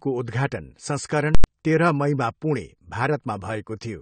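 Plainly audible codec damage runs throughout, with nothing above 9 kHz, likely from AAC compression at around 32 kbps. Unlike a simple low-pass filter, it smears the speech as well as dulling it.

From 1.35 to 1.44 s, just before "तेह्र मईमा पुणे", invalid numbers at full scale pin the output at one extreme for about 93 ms, which fits a 4096-sample block. Unlike a dropout to silence, it is heard as loud pops with no speech between.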